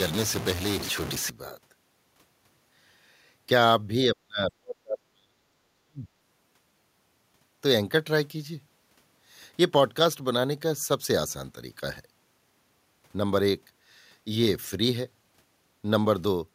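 A speech recording. From 0 to 1.30 s a distortion rides on the signal and the gaps fill with noise, the likely cause being a stuck bit: one converter or data bit held fixed, offsetting roughly half the samples by that bit's weight. Between 4.09 and 6.07 s the talker is pulled down in pieces, by around 40 dB at the deepest, for about one and a half seconds in total. This is speech suppressed in double talk, likely an echo canceller attenuating the near talker while the far side was speaking.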